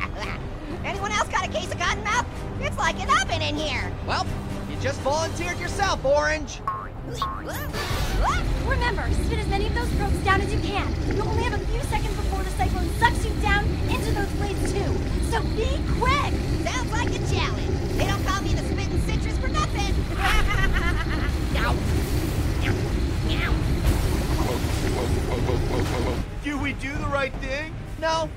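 Nothing stood out as a technical fault on listening to this recording.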